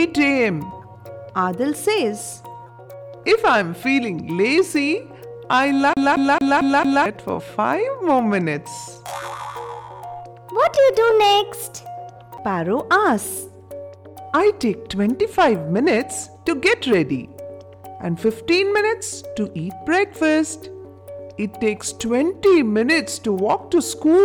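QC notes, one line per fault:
5.93–7.06 s, CD stuck on one turn: the same 0.22 s slice repeats five times with a brief mute at each jump, as the laser falls back one track.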